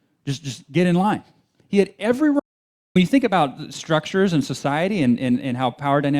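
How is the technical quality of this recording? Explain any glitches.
The speech has one glitch, an audio dropout to silence from 2.40 to 2.96 s. The sound cuts off mid-flow for about 0.56 s and resumes abruptly, likely because the input link failed briefly while recording continued. Unlike a natural pause or noise gate, the gap holds no room tone at all, and whatever was spoken there is lost.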